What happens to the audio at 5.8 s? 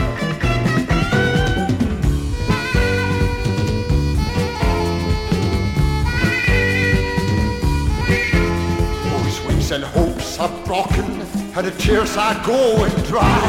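Nothing goes wrong at 5.8 s; the audio plays through that moment intact, with no dropout, click or other fault.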